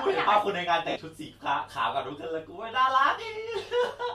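Around 0.90 to 0.96 s, 60 ms of LE Audio frames are lost. The decoder recycles the last spectrum with random signs, briefly smearing the speech into noise.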